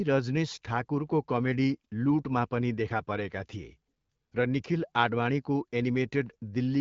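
No faults: the speech stops at about 7.4 kHz with only light coding wear, which fits the AMR wideband (HD Voice) path running at 12.65 kbit/s.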